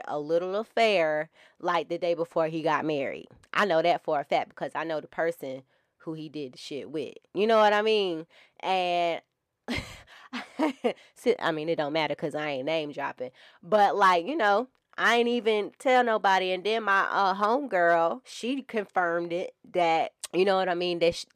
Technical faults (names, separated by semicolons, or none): none